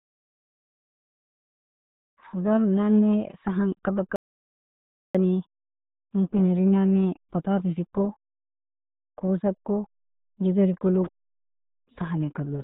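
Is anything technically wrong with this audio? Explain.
Yes, there are two problems here.

The whole clip carries the RealAudio 14.4 codec sound. Nothing gets through above 3.8 kHz, so the speech is boxed into a narrow band and comes out muffled, with a gargly, bubbling texture on top that sounds like heavy damage. That's the kind of squeeze you get from an old dial-up speech codec throwing away most of the detail to hit a tiny data rate, and it fits something around 8 kbit/s.

Then there's an audio dropout to silence from 4.16 to 5.15 s, just under a second. The speech cuts out mid-flow and drops into silence, with no room tone or background at all, then picks straight back up. Whatever was said in that gap is simply gone. The likely cause is the input dropping out briefly, maybe a device or link hiccup, while the recorder kept writing silence.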